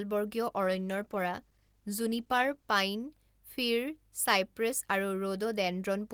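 From 0.62 s to 2.77 s there is a call bitrate drop: the bandwidth estimate fell and the encoder had to code far more coarsely, consistent with a fall from about 32 to 17 kbps, held for 2.09 s. The speech turns rough and watery until the rate recovers.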